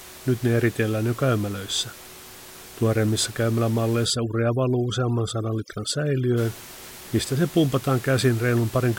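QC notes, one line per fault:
4.05–6.38 s, overdone noise removal: the room noise sits about 19 dB under the speech, and a heavy-handed denoiser has pulled bands near it right down, so the background drops and breaks up into twinkly specks, and quiet parts of the voice go with it.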